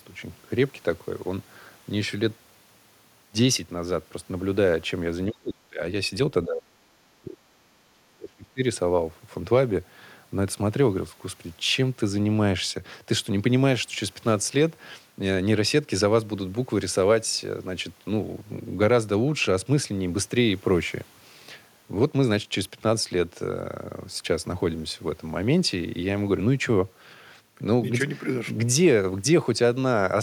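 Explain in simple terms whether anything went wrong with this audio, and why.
Speech suppressed in double talk shows up twice: from 5.3 to 5.8 s, and again from 6.45 to 8.61 s, where the voice drops away in pieces for around a second and a half in total. Each time the voice sinks to almost nothing, very deeply at first, nearly as deep the second time. The likely cause is the echo canceller: with both sides talking at once, it couldn't tell this talker from the returning loudspeaker sound, so it turned everything down.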